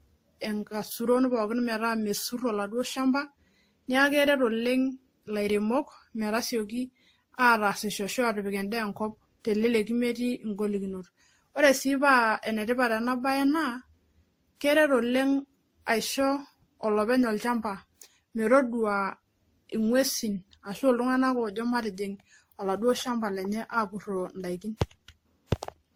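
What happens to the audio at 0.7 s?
At 0.7 s, as throughout the clip, the speech carries transcoding between lossy codecs, likely from being encoded several times in succession. Each pass layers its own artefacts over the previous ones, and nothing remains above 19.8 kHz.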